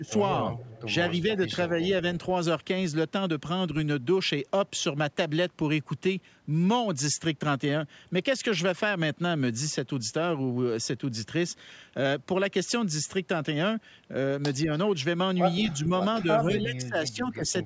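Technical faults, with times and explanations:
0.00–0.12 s, 1.69–1.77 s, 15.63–15.92 s and 16.23–17.54 s, speech suppressed in double talk: the echo canceller likely mistook overlapping talk from both ends for its own loudspeaker echo and pulled the level down. The talker dips by about 15 dB at the start and again across the final stretch, where roughly a second of speech is affected, while the dips at 1.69 s and 15.63 s are shallower, about 5 dB.
0.06–0.12 s and 0.56–0.82 s, echo leak: the far end's echo canceller likely failed to remove everything its microphone caught from its loudspeaker, so a faint copy of the voice returns 189 ms late. It sits about 20 dB below the speech in the first brief scrap and about 25 dB below in the longer one, heard as a delayed shadow trailing the talker.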